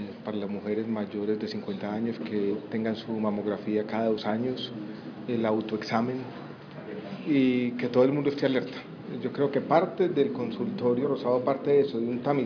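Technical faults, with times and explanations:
No technical faults are heard, so there are no times or explanations to give.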